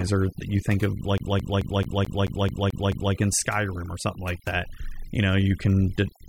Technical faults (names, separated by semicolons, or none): overdone noise removal; CD stuck on one turn